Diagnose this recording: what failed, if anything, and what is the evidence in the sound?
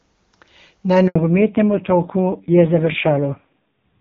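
The speech cuts out abruptly from 1.08 to 1.16 s, an 80 ms hole of silence where the sound fades within a few tens of milliseconds and nothing returns until the link resumes. This is a handover gap at the network stage. The call was passed from one network to another, no speech frames arrived during the switch, and whatever was said in that window is lost.

From 1.16 s to the end the speech turns duller and coarser, with nothing above 4 kHz. This is a fallback to narrowband at the codec stage. Before the handover the call carried clear HD Voice, consistent with AMR-WB at 23.85 kbit/s. Afterwards the top band is gone, and the raspy texture points to AMR-NB at a low rate of about 5.9 kbit/s. The low bitrate adds roughness on top of the lost bandwidth.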